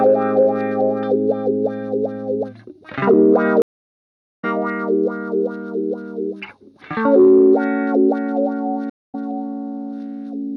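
At 3.62 s the audio stops dead for about 0.76 s and comes back at 4.45 s roughly 0.7 s further on. At 8.90 s a shorter 0.19 s gap ends at 9.15 s about 0.15 s ahead. Both are stream reconnects: the link dropped, the player rejoined and restarted its decoder mid-stream. Unlike a plain dropout, the sound resumes later in the stream with a fresh start.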